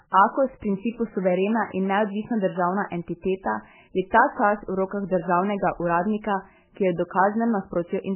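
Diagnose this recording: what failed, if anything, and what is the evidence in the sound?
Heavy MP3 compression artefacts run through the whole speech recording, at the codec stage. Nothing reaches above 3 kHz, and the sound is watery and swirly, which fits a bitrate as low as 8 kbps. The likely mechanism is an MP3 encoder starved of bits, cutting the treble and zeroing weak frequency lines that flicker between frames.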